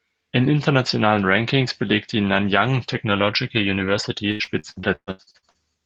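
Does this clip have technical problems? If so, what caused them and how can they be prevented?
Yes. From 4.31 to 5.57 s the speech turns choppy and robotic through repeated packet loss. Eleven gaps, the longest 119 ms, leave nearly half that stretch filled by extending the preceding sound. This distinguishes it from codec coarseness, which stays constant rather than arriving in bursts of holes. A steadier network connection, or a larger jitter buffer with forward error correction, would prevent it.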